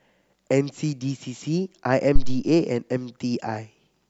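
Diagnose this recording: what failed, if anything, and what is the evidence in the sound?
Phantom power thump at the analogue input, 2.16 to 2.47 s: a deep thump peaking near -4 dBFS, decaying within 71 ms, a supply step through the coupling capacitors rather than a plosive.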